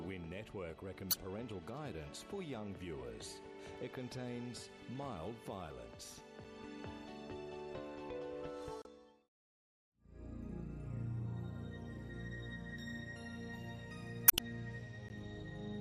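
Two short blocks of digital silence land in the audio, 5 ms at 6.44 s and 15 ms at 15.09 s. The hard cut-outs come across as ticks or dips, from an unfilled output buffer or invalid numbers in processing.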